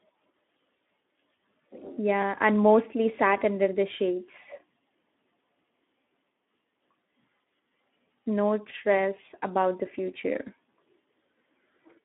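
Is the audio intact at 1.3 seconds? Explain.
No. Speex codec damage runs through the whole clip, 1.3 s included. The speech is squeezed into a 200 Hz to 3.6 kHz band, with nothing above 3.8 kHz. Too few bits for the excitation make it plainly hoarse and noisy, which fits roughly 11 kbps.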